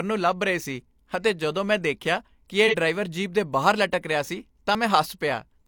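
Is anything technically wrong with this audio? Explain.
Yes, two faults are audible in this speech clip.

From 2.67 to 2.75 s there is AAC frame loss with concealment. A stretch of about 43 ms, consistent with a single lost AAC frame, never reached the decoder. The decoder covered the hole by reusing the last good spectrum, so the speech there turns briefly smeared and phasey rather than dropping out. Unlike a chunk-boundary skip, nothing is cut from the timeline: the rhythm runs on unbroken, with no jump or click, only a blurred patch.

At 4.75 s the audio jumps: roughly 20 ms is simply absent and the material on either side is butted together, giving a small abrupt skip. This is likely audio missing between chunks, with the recorder or processor dropping a sliver while closing one block and opening the next. This fits processing in 2.5 s chunks. Unlike concealment, the gap is not filled with substitute sound. 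Time is removed, so the speech lurches forward instead of smearing.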